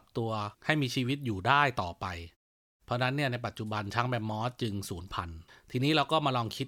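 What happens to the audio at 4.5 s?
Nothing goes wrong at 4.5 s: the audio is intact there, with no dropout, click or distortion to be heard.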